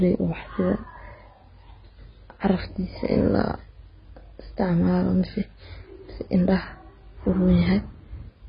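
From start to finish the speech carries heavy AAC compression damage, likely from AAC-LC at a very low bitrate around 16 kbps. Nothing survives above 5 kHz, so sibilants sound dull and fizzy. A spectrogram shows a hard ceiling there.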